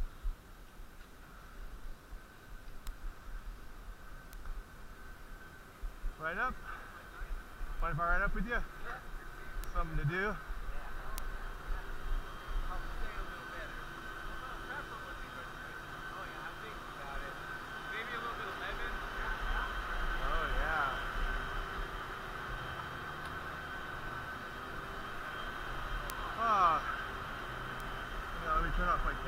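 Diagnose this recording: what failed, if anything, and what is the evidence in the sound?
A bit error spike, from a flipped bit in storage or on a digital link: lone ticks at 2.87, 4.33, 7.8, 9.64, 11.18, 26.1 and 27.8 s, about -35 to -11 dBFS. One or two samples jump a power of two: single waveform needles, thin full-height spectrogram lines.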